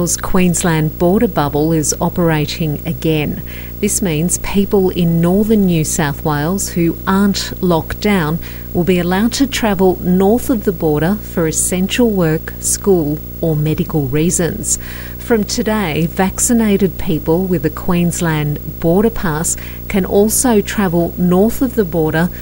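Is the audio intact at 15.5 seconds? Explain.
No. A video or display buzz runs through the whole clip, including 15.5 s: a screen or video cable is leaking into the audio path, adding a buzz at the 59.94 Hz field rate with hash above it, roughly 15 dB below the sound, plus a whine at 15.7 kHz.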